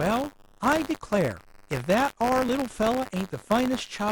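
Buffer tearing runs through the whole clip. A steady robotic rattle sits under the speech at 100 Hz. It drops away in the pauses and returns with the voice. The writer and reader of the playback ring buffer have drifted, so they cross inside each period. A small slice of every buffer, a few percent, still holds audio from about 40 ms earlier. Hard joins on both sides produce the buzz, which fits a 10 ms period.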